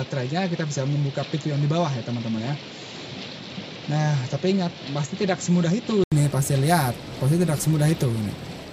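From the start until about 6.12 s the sound is dull and boxy, with nothing above about 7.6 kHz, then it opens up again after a short gap of about 80 ms. That's the signature of the input switched to a poorer device, likely a fallback mic or a headset call profile. On that narrower device, the level sits roughly 5 dB lower and carries its own faint background noise, well below the signal.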